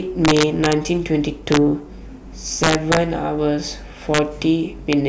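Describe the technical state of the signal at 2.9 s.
At 2.9 s the speech is inside a stretch of integer overflow running from about 2.64 to 2.97 s. The signal is driven roughly 3 dB past the integer ceiling, and instead of being held at full scale, each peak that crosses it wraps around to the opposite extreme. The result is harsh, violent cracks on the louder moments, far sharper and more abrupt than clipping, which flattens peaks into a duller buzzing distortion rather than snapping them across the full range.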